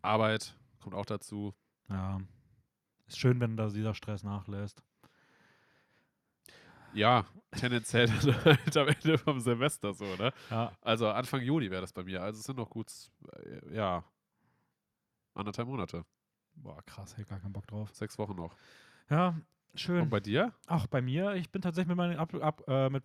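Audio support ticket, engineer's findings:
No faults found in the speech recording. No component flagged and no mechanism to report.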